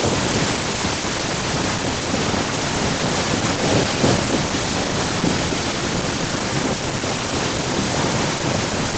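Speech with an echo leak: a copy trails the talker by 252 ms at 0.19–0.6, 0.92–1.21, 1.42–1.92, 2.11–2.71, 2.91–6.5 and 6.68–8.97 s, about 5–10 dB down, likely a far-end speakerphone's echo canceller letting it through.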